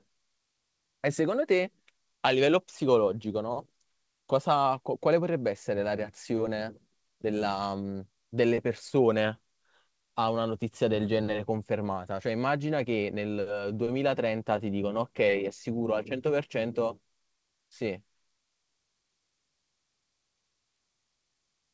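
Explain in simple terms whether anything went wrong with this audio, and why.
Nothing went wrong with this audio; the speech came over an ordinary call connection that was working as it should.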